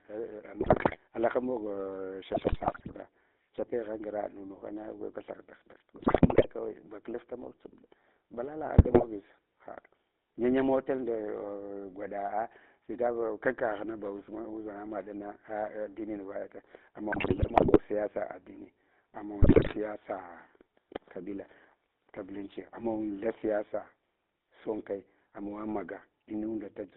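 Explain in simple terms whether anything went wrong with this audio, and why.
Two things went wrong. The whole recording has passed through the GSM full-rate codec, the original digital mobile-phone voice coder. It rebuilds speech from a simplified model of the throat and mouth driven by a sparse train of pulses, so the voice comes out with a plainly audible buzzy, gravelly texture. The phone line also trims the sound to roughly 250 Hz to 3.7 kHz, which makes it thin and boxy.

On top of that, six short bursts of GSM bit errors occur, where corrupted data reached the decoder: 0.60–0.98 s, 2.34–2.97 s (ending just before "kyapegha ngra"), 5.96–6.45 s, 8.78–9.05 s, 17.12–17.77 s and 19.42–19.76 s. In each burst the decoder misreads the tone, pitch and loudness settings, so the sound breaks into squawks, pops and gargling for a fraction of a second.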